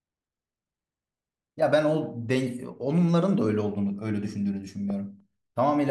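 At 4.90 to 4.92 s there's a loud pop, a single sharp click sitting a few dB above the speech while the talking carries on underneath. It's likely a voltage spike from a plug, switch or static discharge getting into the chain, briefly shaped by the circuitry downstream.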